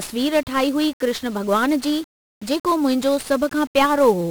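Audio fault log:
Throughout: 1-bit DFPWM compression. Each sample becomes a single up-or-down nudge to an adaptive level that chases the waveform, so the speech carries heavy broadband quantisation noise, fuzzy and crackly, with its treble buried in hiss, consistent with roughly 48 kbps.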